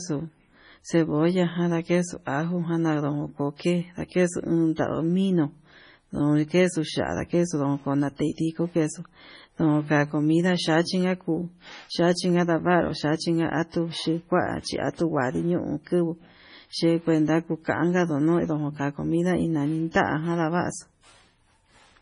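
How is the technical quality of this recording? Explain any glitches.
The recording has clear technical faults. Heavy lossy compression runs through the whole speech clip, and two brief pre-echoes appear.

MP3 compression is heard throughout. Nothing sits above 10.5 kHz, so the treble is cut off flat. Weak frequency lines drop in and out between frames, giving a watery, swirly texture with chirpy sibilants. The heavy damage likely comes from a very low bitrate.

Pre-echo occurs at 4.76 to 4.78 s and again at 19.92 to 19.95 s. The codec spreads its noise across a whole block. So the noise from a sharp onset also fills the silence just before it. Each attack is preceded by a short hiss, about 22 ms and 34 ms long, and sounds smeared.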